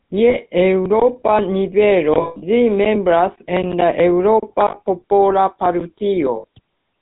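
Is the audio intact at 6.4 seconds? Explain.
No. From 6.36 to 6.45 s, lost GSM frames leave the last good frame repeating for about 80 ms, a rough metallic ring; a spectrogram shows smeared, frozen bands. Underneath, the GSM full-rate codec gives plainly audible buzzy roughness, with nothing above 4 kHz and a flat empty band at the top of the spectrogram.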